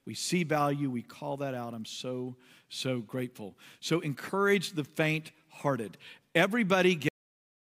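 At 7.09 s the speech stops abruptly. This is a cut-off end. The final stretch of audio was never written out or played back, so the last buffers are simply missing. The sound is cut mid-utterance rather than finishing naturally. There is no decay or tail. The signal drops straight to digital silence, which holds for the remaining 0.64 s. Nothing of the interrupted sound survives past that point.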